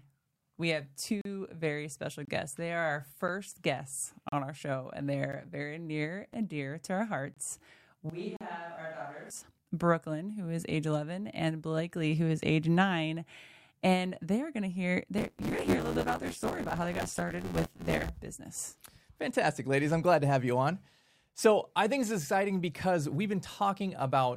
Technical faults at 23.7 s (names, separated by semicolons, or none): none